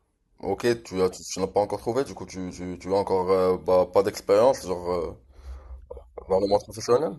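Nothing goes wrong anywhere in this short bit of speech, so there's no technical fault to point to at any moment.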